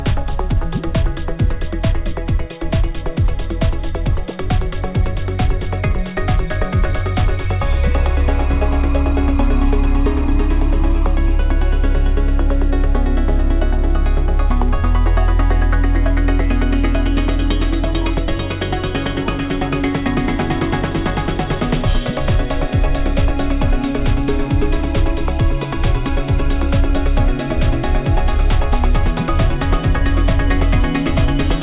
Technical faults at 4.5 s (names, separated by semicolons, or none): none